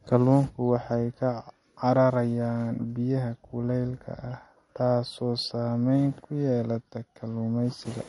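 MP3 compression, throughout: short of bits, the encoder likely cut everything above 11.2 kHz and flickered weak components, leaving the speech plainly watery, which fits roughly 48 kbps.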